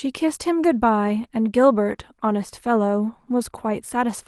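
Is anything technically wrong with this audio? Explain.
No, nothing is technically wrong with this audio. There is nothing in this speech recording that needs a technical explanation.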